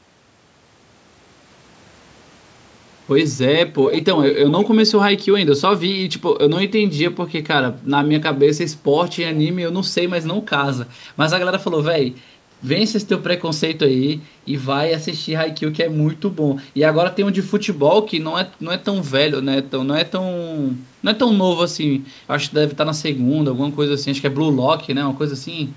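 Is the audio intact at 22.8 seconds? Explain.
Yes, at 22.8 seconds the speech is intact, with no fault, only the ordinary band limit of call microphone processing, which leaves nothing above 8 kHz and trims the lowest bass.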